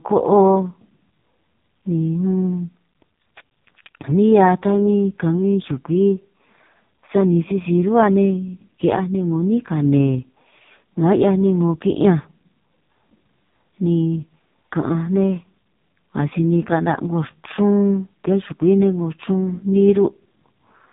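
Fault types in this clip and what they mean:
AMR narrowband mobile codec: The speech has passed through the 2G/3G mobile speech coder, which samples at 8 kHz and rebuilds the voice from a vocal-tract filter excited by a sparse set of pulses in each 5 ms subframe. Here nothing above about 3.8 kHz survives, so sibilants and air are gone, and the heavy damage gives a buzzy, synthetic, robotic timbre throughout, which fits the codec's lowest mode at around 4.75 kbps.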